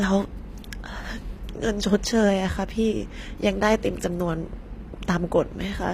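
Throughout, the speech has gritty, metallic sibilants and nothing above 15.5 kHz. This is likely HE-AAC compression, with copied treble that fits a 24 kbps bitrate.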